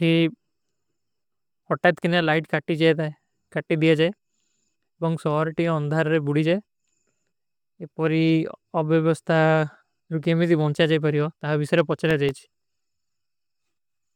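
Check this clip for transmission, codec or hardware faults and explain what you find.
One fault is present, a burst of processor overload crackle from 12.06 to 12.64 s. Here the processor could not keep up with its audio deadlines. The buffers were very short, under a millisecond each. A handful of them were missed in quick succession. Each miss dropped out to silence with abrupt edges. Scattered through the speech, these tiny hard-edged gaps sound like a short gritty crackle. It stops once the load eases.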